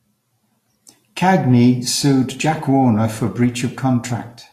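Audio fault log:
Throughout: Vorbis compression, likely at a low setting, something like 35 kbps. Nothing comes through above 14.2 kHz, and the treble is quantised so coarsely that its fine detail turns to hiss, so the speech sounds grainy and consonant attacks come out smeared.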